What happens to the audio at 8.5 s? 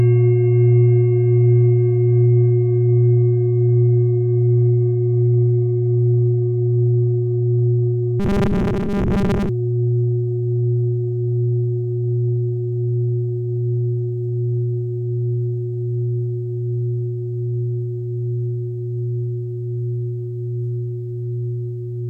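From 8.20 to 9.49 s the sound turns into a rigid, metallic buzz at 200 Hz: robotic sound from repeated short buffers. The likely cause is audio arriving too seldom, so playback fills most of the gap by looping a slice of about 5 ms, which fits that 200 Hz pitch, while real audio is skipped. On a waveform the span shows a tightly periodic, copied pattern. A spectrogram shows evenly spaced horizontal harmonics at multiples of 200 Hz.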